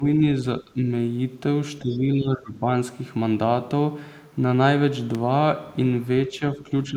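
A speech recording with speech suppressed in double talk at 0.00 to 0.04, 0.61 to 0.84, 1.82 to 2.67 and 6.28 to the end, where the voice dips by up to roughly 15 dB. An echo canceller likely turned it down while both sides spoke, unlike a dropout, which leaves silence. Briefly at 1.93 to 1.97, the other side's voice leaks through very faintly, roughly 30 dB under the talker, likely uncancelled loudspeaker echo rather than crosstalk, since it falls within a suppressed stretch. At 5.15 s an electrical switching spike gives a brief burst on top of the speech, likely a nearby arc rather than a digital click.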